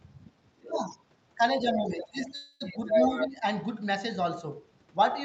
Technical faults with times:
0.62-0.82 speech suppressed in double talk
0.90-0.98 other side's voice leaking through
1.62-3.28 other side's voice leaking through
1.64-2.83 speech suppressed in double talk
2.35-2.62 call audio freeze
3.26-3.44 speech suppressed in double talk

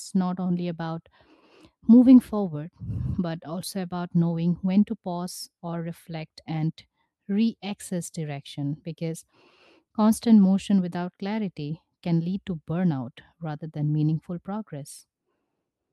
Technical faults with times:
none

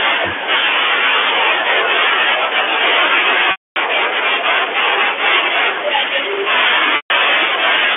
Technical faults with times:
3.51-3.76 packet loss with pitch repetition
6.96-7.10 packet loss with pitch repetition

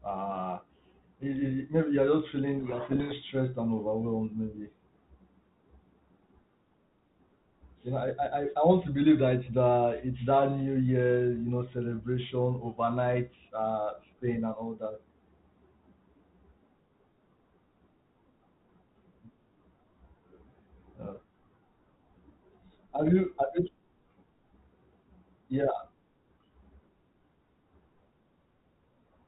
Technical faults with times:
2.59-3.13 codec payload misread

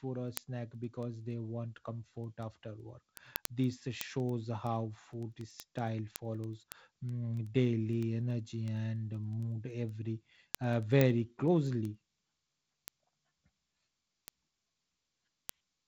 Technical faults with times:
0.19-15.87 word clock ticks

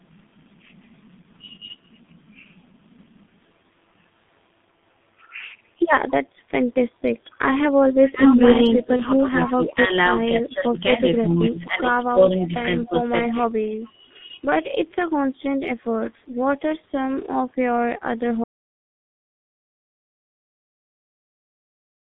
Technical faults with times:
0.00-22.17 G.723.1 codec
7.30-9.51 echo leak
7.31-14.56 speech suppressed in double talk
8.96-9.07 VoIP packet loss concealed by the speech codec
11.17-11.33 echo leak
12.44-13.88 echo leak
18.44-22.17 audio dropout to silence

